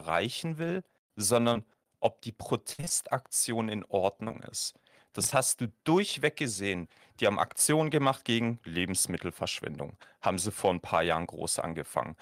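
At 1.53 s, just before "ob die", a short concealed packet loss smears about 20 ms of speech into a brief wobble. On a spectrogram it shows as a blurred vertical strip where the harmonics freeze.

Just after "ob die", from 2.73 to 2.91 s, repeated packet loss leaves several holes, the longest 54 ms. Over half that span is patched by extending the preceding sound, so it turns choppy and robotic. From 4.23 to 5.33 s the same fault recurs more sparsely, with gaps up to 26 ms. Both stretches show as repeated frozen, stretched blocks in the spectrogram and abrupt envelope steps in the waveform.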